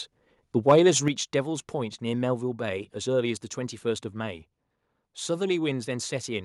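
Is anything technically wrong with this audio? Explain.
Yes, there are two related faults in this speech clip.

From 0.68 to 0.72 s there is microphone overload. The input was likely set too hot, so the peaks pushed past the converter's ceiling by about 3 dB and their tops were sheared off, with roughly one sample in twenty pinned at the limit. It is heard as a brief harsh crackle on the loudest syllable. On a waveform the peaks become flat plateaus, and a spectrogram shows a smear of broadband energy across the high frequencies.

At 1.08 s the microphone volume steps down by about 6 dB in a single jump. The call software most likely reacted to the overload just before it and cut the device's input gain, so the voice and the background noise drop together, all at once. It is heard as the sound suddenly getting quieter. On a waveform the envelope narrows abruptly at that point, and on a spectrogram the whole frame dims by the same amount from there on.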